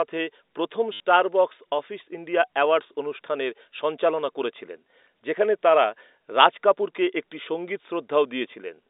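Packet loss with the last packet repeated strikes this speech recording at 0.93 to 1.00 s. 70 ms of audio went missing, and the receiver replayed its final packet to fill the gap, producing a short robotic stutter that buzzes near 100 Hz, which fits 10 ms packets. The line band runs from 300 Hz to 3.7 kHz, as G.711 telephone coding gives.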